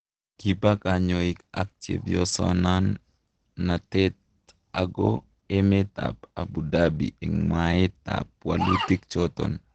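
Throughout the speech nothing sounds above 8.9 kHz and low-bitrate smearing persists: likely low-bitrate audio saved at a high bitrate, the roomy MP3 restoring nothing.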